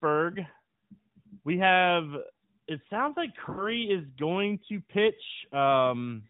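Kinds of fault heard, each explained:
Lost AMR speech frames: a short run of frames failed their checks. Around 3.50 to 3.72 s the decoder stretches the last good sound and fades it toward silence, a gap that fits roughly four 20 ms frames, before the voice returns a little rough.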